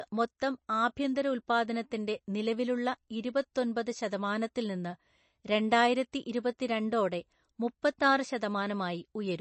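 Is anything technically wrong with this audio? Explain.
Yes. Throughout, likely MP3 compression, at a rate that fits 32 kbps: starved bits drop weak frequency lines and remove everything above 8.3 kHz, leaving plainly audible watery swirl.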